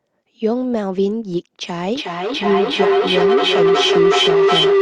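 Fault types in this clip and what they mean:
Feedback howl: Two devices sharing a room and a call let the mic-to-speaker loop gain level each pass. From 1.86 s it builds into a tone around 400 Hz, pulsing roughly every 0.4 s, peaking about 5 dB over the speech and never breaking before the end.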